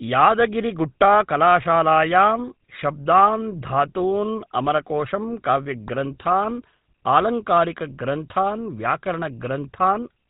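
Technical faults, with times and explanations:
Throughout, GSM full-rate codec: the whole clip has that gravelly, buzzy edge, and nothing comes through above 4 kHz. The vocal tract is rebuilt from a model driven by coarse, sparse pulses, which fits the old 13 kbps GSM full rate, and the damage is plainly audible.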